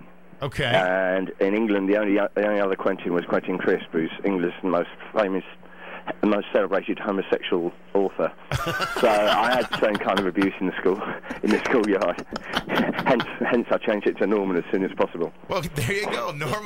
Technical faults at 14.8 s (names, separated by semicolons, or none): none